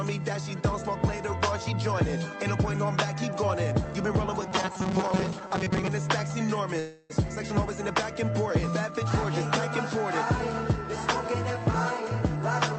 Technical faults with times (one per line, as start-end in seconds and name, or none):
4.41-5.89 robotic sound from repeated short buffers
6.79-7.12 call audio freeze